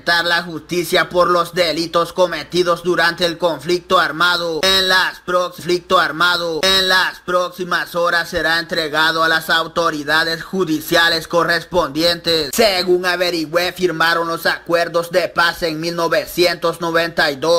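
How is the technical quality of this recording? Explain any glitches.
One glitch stands out: a stream segment repeated. From 5.59 to 7.59 s, the player queued the same two-second segment twice, so that stretch replays after a small blip at the jump back.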